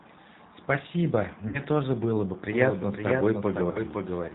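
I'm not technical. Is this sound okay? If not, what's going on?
No. The call was squeezed through the G.729 codec, a very economical phone-call format that rebuilds the voice from a rough model of the throat and mouth instead of sending the real sound. It also throws away everything above 4 kHz. That's why the whole clip sounds dull, slightly rough and a bit artificial, like an old phone line, while the speech stays understandable.

There are also two moments of VoIP packet loss concealed by the speech codec. Small chunks of the call went missing in transit, one from 1.48 to 1.60 s and one from 3.71 to 3.80 s, gaps of roughly 60 ms and 40 ms that suggest about three and two lost packets. The receiving phone guessed what should fill each hole by stretching the last bit of voice it had and fading it out. You hear a brief buzzy or noisy, smeared blur at those points, and the voice sounds weak or distorted just afterwards.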